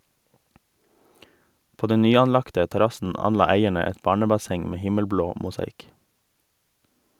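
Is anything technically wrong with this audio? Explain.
No, nothing technically wrong stood out on listening to this speech recording.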